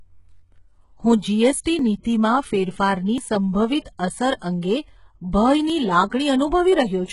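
Speech runs through the whole clip with a gritty, lispy top end. The treble sounds synthesized rather than real, the heavy damage of HE-AAC compression, likely at a very low bitrate around 12 kbps, where spectral band replication copies lower bands upward instead of coding them. Four small jumps forward in the speech fall at 0.43, 1.79, 3.18 and 5.70 s. Each skips roughly 20 ms, and about twice that at 3.18 s. These are likely dropped buffers (overrun), where samples were overwritten before being read and the two sides were spliced together. A brief hiss smears the onset of attacks at 1.61 to 1.66 s, at 2.02 to 2.05 s just before "ફેરફારની સંભવિત અસર", at 3.98 s after "ફેરફારની સંભવિત", and at 4.36 to 4.42 s after "ફેરફારની સંભવિત અસર". This is pre-echo, lasting 17 to 54 ms, where block-spread quantisation noise leaks ahead of each transient.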